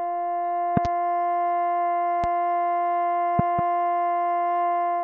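Loud pops interrupt the music at 0.77 to 0.88 s (a double), 2.24 to 2.26 s (single) and 3.39 to 3.61 s (double), jumping well above the level as sharp thumps. A sudden voltage pulse, likely from a switch, plug or static, is added while the music continues underneath.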